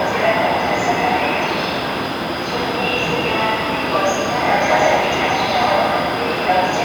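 Nothing technically wrong can be heard in this recording of sounds; the signal holds steady and intact throughout.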